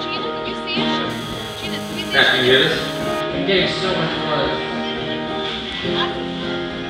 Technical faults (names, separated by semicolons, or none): GSM phone buzz